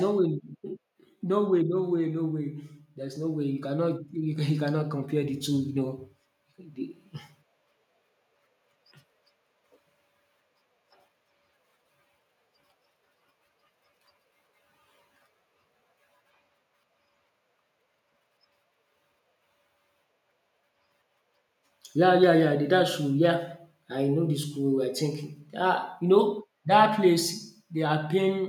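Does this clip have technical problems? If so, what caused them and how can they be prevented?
Yes. From 0.05 to 1.59 s there is automatic gain falling: the gain control judged the speech too loud and pulled its gain down by about 3 dB, so voice and background sink together. Setting a lower fixed input gain before recording prevents this.

From 1.99 to 7.05 s the opposite occurs, automatic gain rising: the control judged the input too quiet and raised gain by about 8 dB over five seconds, swelling speech and room noise alike. Disabling AGC and using manual gain prevents it.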